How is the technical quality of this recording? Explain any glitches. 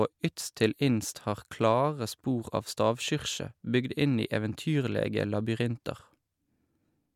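No glitches or technical faults can be heard anywhere in the recording.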